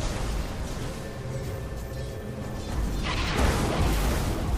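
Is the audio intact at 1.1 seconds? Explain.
No. At 1.1 s the sound is doubled, and the doubled audio track runs through the whole clip: a second, full-band copy of everything trails the original by roughly 0.7 s at a level about 5 dB lower. The likely cause is the same signal being captured a second time through a slower path and mixed back in. Unlike an echo or reverb, there is just one clean repeat with no decaying tail and no room colouring.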